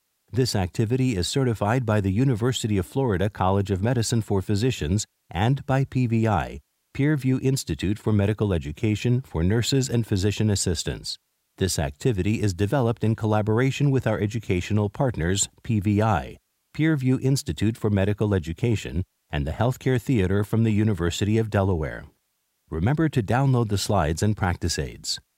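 No technical faults can be heard anywhere in the speech.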